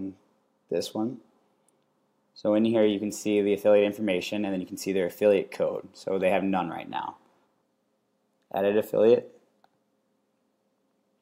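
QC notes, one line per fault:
No faults heard anywhere in this audio.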